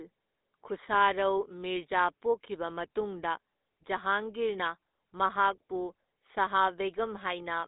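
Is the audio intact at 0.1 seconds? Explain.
No. At 0.1 s the speech already carries GSM full-rate codec damage, and it runs through the whole clip. This codec models the vocal tract and drives it with sparse, regular pulses, which fits a rate near 13 kbps. The rough excitation gives the speech a plainly audible buzzy, gravelly grain. The band sits roughly between 250 Hz and 3.7 kHz. Nothing is heard above 3.8 kHz, so the sound is dull and narrow.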